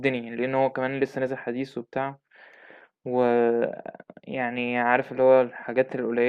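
A de-emphasis filter has been applied wrongly to this speech recording from 1.01 s to the end: a treble cut meant to undo pre-emphasis has gone onto audio that had none, or has been applied a second time. The response now rolls off smoothly toward the top, sitting about 10 dB lower at 10 kHz than at 1 kHz. From that point on the speech sounds dull and muffled.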